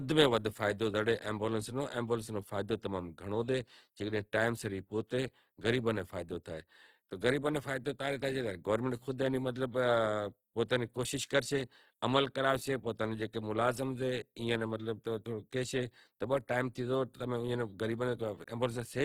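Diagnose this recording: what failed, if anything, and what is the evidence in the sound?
The codec stage failed, most likely through Opus compression in its music (CELT) mode. Throughout the speech, tones turn rough, grainy and noisy, not swirly. Starved bands are refilled with folded or noise content, so energy persists up to 19.8 kHz. This fits roughly 16 kbps.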